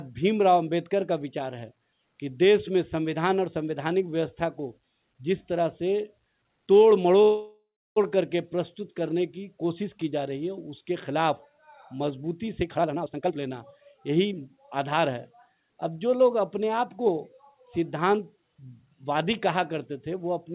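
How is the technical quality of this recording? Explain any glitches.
The recording has two glitches, and the sound above 4 kHz is missing throughout, which fits a telephone-grade call codec such as G.711 A-law at 64 kbps.

From 7.22 to 7.98 s, the sound stalls. The last moment is stretched into a fading buzz or hiss, then goes silent for about 300 ms before resuming where it stopped. This is a call audio freeze, likely from delayed packets emptying the jitter buffer. Nothing is lost, but the stream runs about 0.74 s later afterwards.

From 12.66 to 15.15 s, the audio rushes along at about 129% speed with its pitch unchanged. This is a jitter buffer speed-up: the receiver repeatedly cut out pitch-period-sized pieces, roughly 0.7 s in total, to shed built-up delay.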